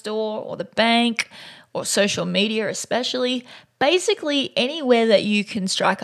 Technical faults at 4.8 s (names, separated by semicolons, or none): none